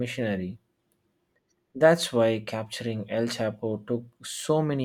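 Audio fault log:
No problems turned up anywhere in this bit of speech, so there's nothing to log here.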